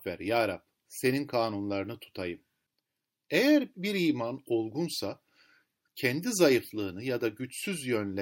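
A speech recording with plainly audible MP3 compression damage running the whole way through: the high end swirls and warbles as weak detail flickers between frames, most likely from an MP3 encode around 64 kbps starving the upper bands of bits.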